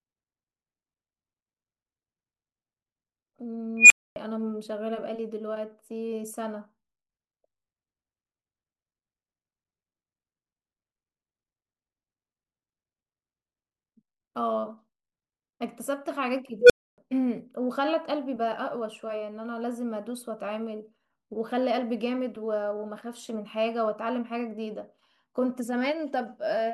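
At 3.77 s the speech is hit by an unstable filter: a tone around 3 kHz swells over about 131 ms into a loud squeal, clips, then drops to 260 ms of silence once the filter's values overflow and it resets. The same thing recurs at 16.59 s with a lower tone, roughly 500 Hz, building in about 107 ms before 280 ms of silence. Both times a recursive filter's feedback runs away.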